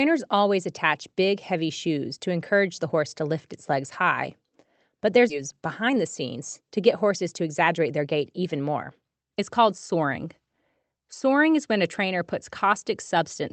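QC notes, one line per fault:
5.29–5.31 s, skip ahead: The speech jumps forward here with no gap. About a second of audio is missing. The two sides are joined almost directly, so the sound lurches from one point to a later one. This happens when a stretch of audio is dropped while later audio is already waiting, and playback simply continues from the newer audio. Nothing fills the hole, so the cut is abrupt rather than silent.
5.35–10.84 s, jitter buffer speed-up: Just after the jump, the speech runs fast for about five and a half seconds, at roughly 108 percent of normal speed. The pitch stays the same, but the delivery sounds hurried. The receiver was holding more audio than it wanted. To catch up, it cut out many tiny pieces, each one or a few pitch periods long. Together they remove something like 0.4 s. Through this stretch the Opus call coding is still audible as coding noise, with nothing above 8 kHz.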